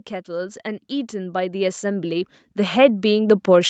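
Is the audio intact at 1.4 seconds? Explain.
No. Automatic gain rising runs from 0.25 to 3.69 s: the gain control keeps lifting a quiet input, so speech and background swell together, and the waveform envelope and spectrogram brightness climb steadily.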